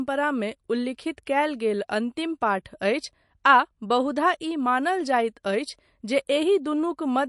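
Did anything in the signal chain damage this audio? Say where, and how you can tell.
Yes. The damage is at the codec stage, across the whole speech clip. Nothing remains above 11.3 kHz, and the sound is plainly watery and swirly. That points to MP3 compression, likely at about 48 kbps, cutting the treble and toggling weak frequency lines between frames.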